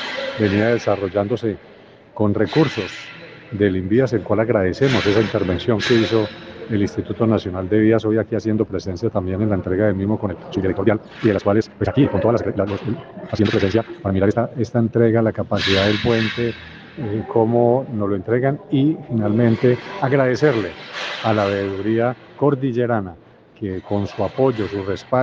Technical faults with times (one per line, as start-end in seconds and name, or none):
10.24-14.44 time-stretched section